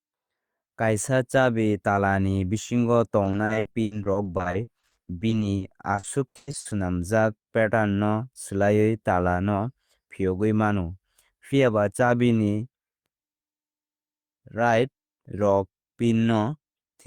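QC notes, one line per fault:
3.23–6.73 s, repeated packet loss (robotic sound): the stream lost or received late audio packets again and again across this stretch, close to thirty times, with the decoder filling each hole by extending the preceding sound. About 1.04 s in total, roughly 30% of the span, is synthetic fill, with single gaps up to 100 ms. The patches keep arriving before the audio settles, so the speech turns choppy, with pieces missing.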